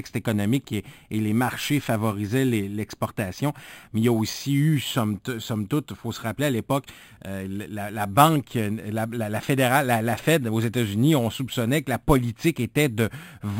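Throughout, samples repeated without smoothing from a rate near 11 kHz cause imaging from sample-and-hold upsampling: mirrored speech at 5.5 to 11 kHz, about 18 dB down, heard as metallic fizz.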